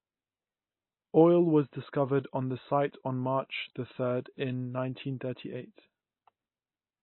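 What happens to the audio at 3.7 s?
At 3.7 s the speech carries the same damage heard throughout the clip, most likely MP3 compression at a low bitrate around 24 kbps. The encoder has cut everything above 4.1 kHz and drops weak frequency lines frame to frame, giving a dull, watery, swirling sound.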